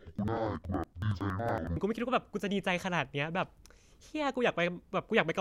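Speech recording. From 0.0 to 1.78 s, interleaved audio is read as planar. It sounds an octave low, doubled and choppy at 10.8 Hz, fitting 4096-sample blocks.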